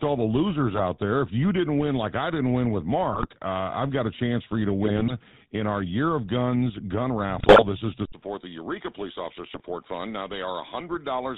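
Speech with a buzzy, gravelly roughness and nothing above 4 kHz throughout, the plainly audible damage of the GSM full-rate codec, consistent with its 13 kbps vocal-tract model and sparse pulse excitation. Brief squawks, pops and gargling break out at 0.74–0.83 s, 3.12–3.27 s, 4.84–5.15 s, 7.37–7.65 s and 9.54–9.60 s. These are GSM bit errors, where corrupted filter, pitch or gain values distort or blow up the sound frame after frame while each bad patch lasts. At 8.05 s an 80 ms silence gives way to a duller, about 5 dB quieter sound with a new noise floor roughly 35 dB below the speech, likely from the input switching to a poorer device.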